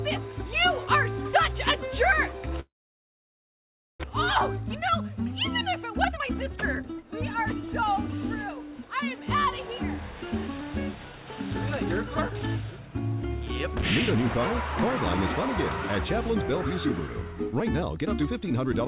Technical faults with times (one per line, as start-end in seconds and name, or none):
2.60-4.06 long network dropout
5.76-8.15 jitter buffer speed-up